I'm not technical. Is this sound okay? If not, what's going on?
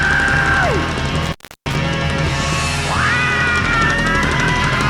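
No. There's an intermittent contact from 1.22 to 1.76 s: a loose cable or plug briefly lost connection, so the sound crackles and drops out for about a third of a second.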